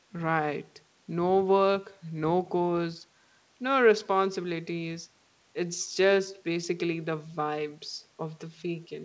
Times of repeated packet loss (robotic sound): none

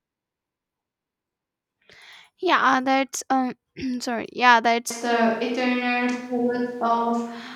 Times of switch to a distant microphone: 4.91-7.56

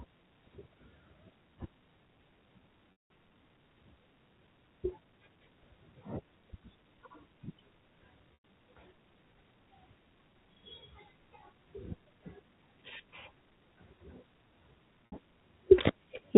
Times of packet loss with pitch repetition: 2.92-3.10, 8.34-8.41, 15.10-15.12

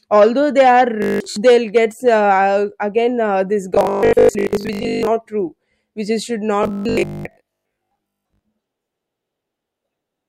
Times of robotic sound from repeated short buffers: 1.02-1.36, 3.75-5.07, 6.63-8.43

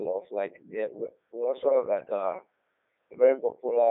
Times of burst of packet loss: none

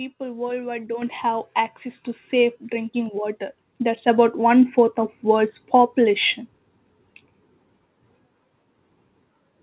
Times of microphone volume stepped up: 1.02, 2.04, 3.06, 4.08

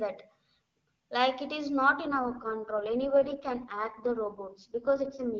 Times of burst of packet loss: none

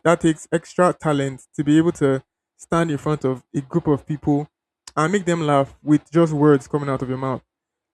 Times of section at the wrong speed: none

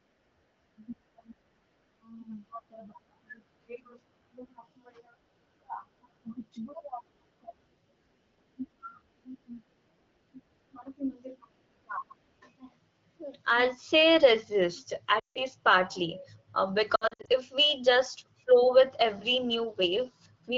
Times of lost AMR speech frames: 15.19-15.43, 16.95-17.29

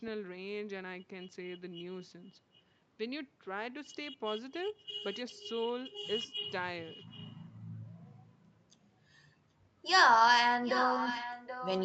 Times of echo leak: 6.86-7.32, 10.63-11.85

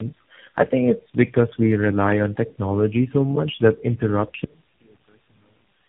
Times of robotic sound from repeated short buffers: none

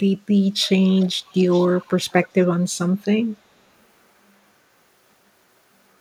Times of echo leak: 0.87-2.27

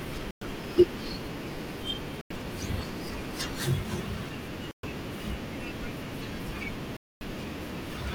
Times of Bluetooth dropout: 0.31-0.42, 2.21-2.31, 4.71-4.85, 6.97-7.23

